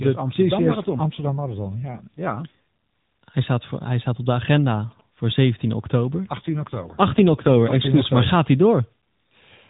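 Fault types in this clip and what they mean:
AMR rate drop: Twice, from 0.54 to 2.55 s and from 6.40 to 7.92 s, the voice turns coarser, buzzier and more synthetic, with no gap and no change in bandwidth, then clears again. This is the network ordering the AMR-NB codec down from its usual 12.2 kbps, where it carries the voice with only light damage, to 5.9 kbps. The codec then models the voice more crudely and spends the saved bits on protecting the weak radio link.
GSM signalling bursts: Just after "hij staat op de", from 4.76 to 5.87 s, a galloping dit-dit-dit of short buzzes sits well below the speech, roughly 30 dB down. The buzz repeats at about 217 Hz, the frame rate of a 2G transmitter. A nearby GSM phone sending brief signalling bursts, as it does before a call or text arrives, is being rectified by the audio circuitry into this pattern.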